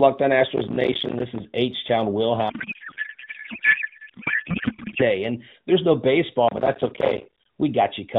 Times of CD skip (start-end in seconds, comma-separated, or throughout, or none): none